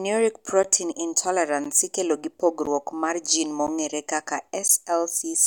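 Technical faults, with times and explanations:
0.63, 1.64, 2.66, 3.67 and 4.68 s, gap between chunks: the speech was delivered in blocks of 1.0 s, and at each join about 12 ms of silence was inserted before the next block began, likely from codec padding or a player starting each chunk late. Nothing is lost, but the sound stops and resumes at a steady once-per-second rhythm, for example just before "ikelo gi" and again right after "mar gin".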